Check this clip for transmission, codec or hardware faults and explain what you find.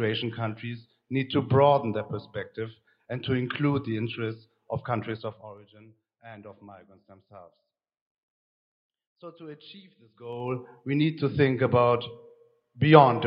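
Two level moves carry a ticking zipper noise: a drop of around 20 dB from 5.10 to 5.63 s, and a matching rise from 10.08 to 10.56 s. The gain was stepped in 2 dB jumps with no smoothing, roughly 20 and 30 steps a second, and each jump clicks.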